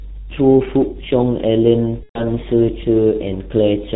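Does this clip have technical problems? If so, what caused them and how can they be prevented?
Yes, there are two problems. The whole speech clip has gone through the G.723.1 codec, and the damage is heavy. Nothing above 4 kHz survives, so the voice is muffled, and the slowly updating voice model gives it a hoarse edge and smears the consonants together. The thinness fits G.723.1's 6.3 kbit/s mode, which also works in 30 ms frames. To avoid this, use a wideband codec like Opus on the call instead of G.723.1.

The second problem is VoIP packet loss concealed by the speech codec, from about 2.03 to 2.24 s. The missing stretch is about 120 ms, which fits four lost 30 ms frames. During the gap the decoder keeps repeating its last pitch and filter settings while turning the level down, so the voice stretches and fades, then goes silent from the third lost frame. Each frame builds on the one before, so the voice stays weak or distorted for tens of milliseconds or more after packets return around 2.24 s. 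A jitter buffer, forward error correction or a less congested network path would keep those packets from being lost.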